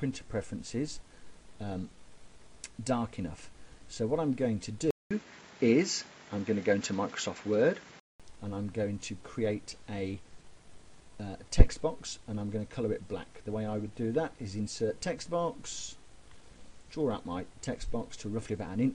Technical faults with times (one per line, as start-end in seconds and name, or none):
4.91-8.20 input switched to a poorer device